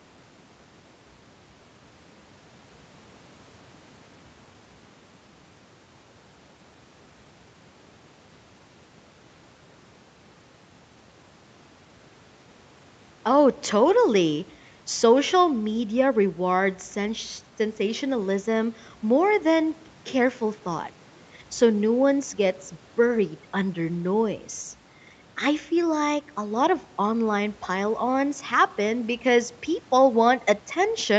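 No technical faults are audible.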